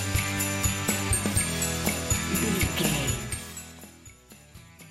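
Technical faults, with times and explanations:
2.97 to 3.99 s, zipper noise. The level drops about 20 dB in 2 dB steps, around ten a second. Nothing smooths the jumps between steps. Each jump leaves a small click, so ticking rides on the sound while the level falls.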